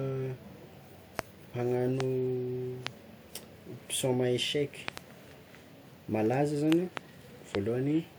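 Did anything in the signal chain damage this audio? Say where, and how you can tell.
Yes. The damage is a series of loud pops, eight in all across six events. Single pops sit at 1.19 to 1.21, 2.00 to 2.03, 2.87 to 2.89 and 7.55 to 7.57 seconds. Pairs of pops fall at 4.88 to 5.00 and 6.72 to 6.99 seconds. Each peaks about 20 dB above the speech, which carries on underneath. A sudden voltage step or pulse was added to the signal, likely from a plug, a switch, static or a driver glitch, so the stage is analogue wiring or the driver.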